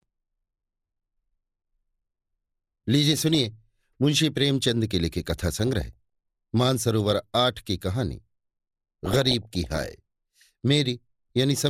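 DAB burbling breaks into the speech at 3.13 to 3.45 s, 5.27 to 5.93 s, 7.01 to 7.14 s and 9.06 to 9.94 s: weak reception lets a small share of bit errors slip past error correction, corrupting MP2 sub-band samples so short blips of noise break through.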